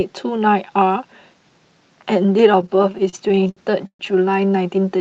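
Repeated stalls (stutter) hit this speech between 2.61 and 4.01 s: fifteen brief gaps, the longest 129 ms, where the jitter buffer ran dry and the last sound was stretched, concealing about a quarter of that span, heard through an Opus call path whose band tops out near 8 kHz.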